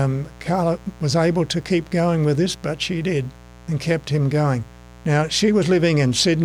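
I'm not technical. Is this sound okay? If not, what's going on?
No. A steady, raspy buzz sits under the sound from start to finish. This is mains buzz: electrical interference from the 60 Hz power supply, probably from a dimmer, charger or unshielded cable, leaking into the recording as sharp, rapidly repeating spikes.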